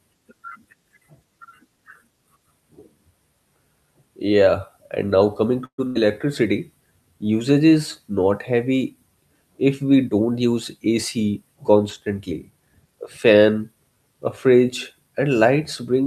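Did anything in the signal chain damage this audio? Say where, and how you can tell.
Yes. There is a call audio freeze at the network stage, from 5.65 to 5.85 s, just after "and now coming". The last sound is held as a fading buzz or hiss that drops to silence, filling about 128 ms in all, about 80 ms of it silent. The audio then resumes where it stopped, so the sound is delayed about 128 ms but nothing is skipped. The likely cause is packets held up in transit, leaving the jitter buffer empty.

A burst of packet loss follows at the same network stage, from 5.87 to 5.97 s. Here the receiver again stretches the last sound and turns it down, filling about 82 ms. When the audio returns, it jumps ahead. About 80 ms of the original is gone. That points to a short run of packets lost or arriving too late to play, with concealment covering the hole.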